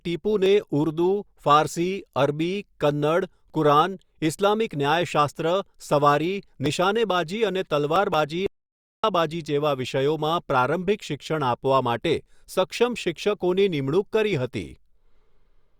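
At 8.46 s the speech drops out to silence until 9.04 s, a gap of about 0.57 s with no room tone at all. That's the audio dropout to silence you get when the input likely disconnected or muted while recording carried on.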